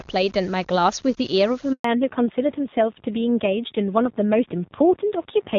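A gritty, grainy roughness clings to the speech from start to finish, sitting roughly 30 dB below it and worsening on quiet syllables and decays. The likely cause is low bit depth without dither, truncated to about 7 bits, so the rounding error tracks the signal instead of forming a smooth hiss.

At 1.72 s the speech dies away abruptly and stays silent for 120 ms until 1.84 s. This is a handover gap: while the call moved between networks, no speech frames arrived, and whatever was said in that stretch is simply gone.

From 1.84 s to the end the speech turns duller and rougher, with nothing above 4 kHz. Before this point the AMR wideband (HD Voice) codec carries clear, bright speech, consistent with its top rate near 24 kbit/s. Afterwards a fallback to narrowband cuts the bandwidth, and the coarser texture fits AMR-NB at about 7.4 kbit/s.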